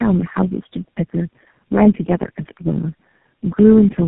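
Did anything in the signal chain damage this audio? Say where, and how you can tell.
Yes, at the codec stage: tandem speech coding runs through the whole clip. The speech is rough, muffled and warbly, with nothing above 3.8 kHz. The damage exceeds what any single narrowband codec causes, which fits about four speech coders in a row, each re-coding the previous one's errors.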